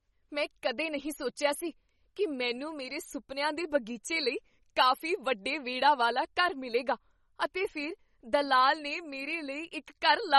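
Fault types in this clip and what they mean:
MP3 compression: The speech has a watery, swirling quality throughout, with plainly audible damage and nothing above 11.8 kHz, so the treble stops abruptly. This is likely low-bitrate MP3 encoding, and the sound fits a rate around 32 kbps. Starved of bits, the encoder discards everything above a fixed cut-off and drops weak frequency components that flicker in and out between frames, which produces that unstable, underwater texture.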